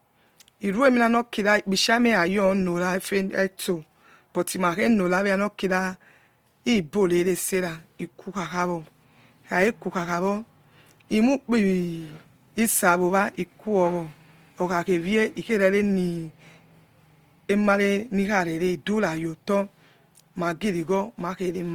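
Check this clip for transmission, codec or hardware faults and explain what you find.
There's one fault, and it runs through the whole clip: Opus compression damage you can plainly hear. The audio still reaches up to about 20.3 kHz, so the bandwidth hasn't been narrowed. Instead, the speech sounds rough and grainy, with a noisy edge on the harmonics. That points to the encoder's music (CELT) mode running short of bits, likely at a low rate around 24 kbps. It fills bands it can't afford to code properly with folded or noise-like content, which gives that gritty texture in place of the watery swirl MP3 would produce.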